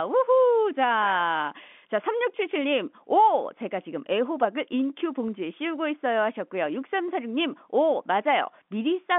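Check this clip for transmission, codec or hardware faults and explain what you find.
No faults found.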